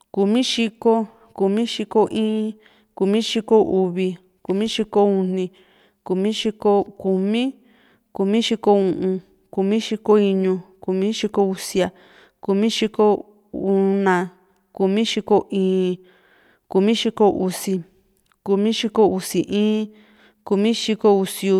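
A speech recording with no technical faults audible anywhere in it. Nothing interrupts or degrades the sound at any point.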